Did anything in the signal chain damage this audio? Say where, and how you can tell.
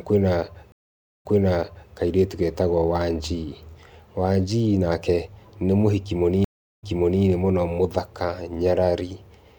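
Yes. Stream reconnects at the network stage. Silences of 525 ms at 0.72 s and 380 ms at 6.44 s. A new decoder resumes speech 679 ms and 418 ms earlier, repeating audio before "kairĩtu getagwo".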